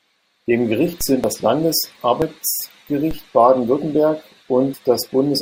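A speech recording with two faults. Dropped buffers at 0.34, 1.24, 2.22 and 4.74 s each jump ahead by roughly 40 ms, likely from the capture program missing its read before the hardware overwrote the buffer. DC steps at 1.01 and 3.11 s each give a low thump as the baseline shifts, then the offset fades away at a rate matching a 5 Hz high-pass.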